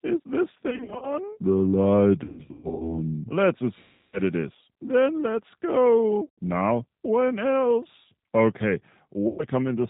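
The G.729 codec colours the whole speech clip. It rebuilds the voice from a vocal tract filter, a pitch predictor and sparse pulses at 8 kbit/s. The damage is plainly audible. The sound is rough and synthetic, with nothing above 4 kHz.

VoIP packet loss, concealed by the speech codec, hits at 0.70 to 1.15, 2.24 to 2.98, 3.79 to 4.21, 6.26 to 6.29 and 9.28 to 9.45 s. The first two bursts are scattered, with runs of up to 40 and 120 ms. The decoder stretches its last sound, fading it. Speech stays weak briefly afterwards.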